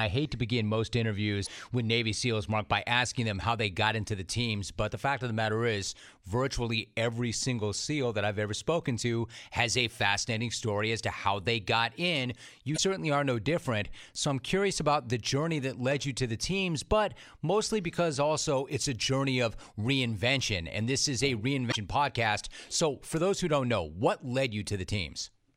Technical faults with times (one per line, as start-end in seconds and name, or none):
1.43-1.48 damaged data in a compressed stream
12.74-12.79 damaged data in a compressed stream
21.70-21.75 damaged data in a compressed stream